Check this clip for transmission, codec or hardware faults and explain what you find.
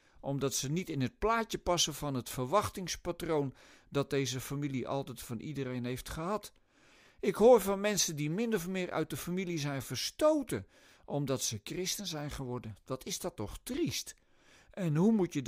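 Nothing here points to a transmission, codec or hardware problem; the speech comes through steady the whole way, with no faults to report.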